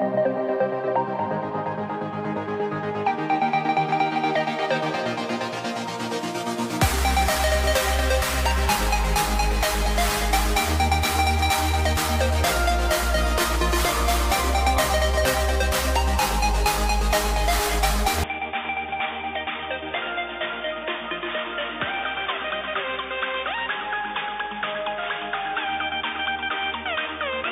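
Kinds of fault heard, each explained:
Input switched to a poorer device: At 18.24 s the sound abruptly turns dull and boxy, with nothing above 3.6 kHz, drops roughly 10 dB in level, and gains a faint new background noise, with no gap at the change. This is likely a mid-recording switch to a narrower-band input device.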